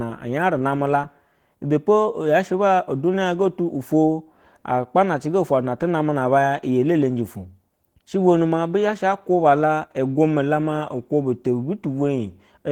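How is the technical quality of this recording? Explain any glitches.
The recording quality is limited by audible lossy coding throughout the speech.

Opus voice compression affects the whole clip. The codec is running in hybrid mode: a SILK linear-prediction coder handles the band below 8 kHz, and a CELT transform layer covers the upper band, which still extends to about 20.2 kHz. The damage is plainly audible and fits a low bitrate around 16 kbps. The coarse excitation coding leaves the speech sounding hoarse and faintly robotic, with processing in frames of about 20 ms.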